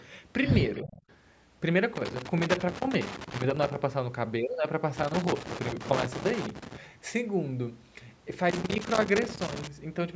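From 0.82 to 1.14 s a faint copy of the speech trails about 0.32 s behind and some 20 dB below it. This is an echo leak, likely from a far-end loudspeaker whose echo canceller let residue through. Overlapping it, from 0.83 to 0.96 s, the speech briefly dips by roughly 15 dB. That is speech suppressed in double talk, likely the canceller ducking the talker while both sides were active. Irregular scratchy bursts of loose connector crackle then run from 1.96 to 3.76 s, 4.97 to 6.77 s and 8.50 to 9.67 s, where an intermittent contact repeatedly breaks and remakes the signal path.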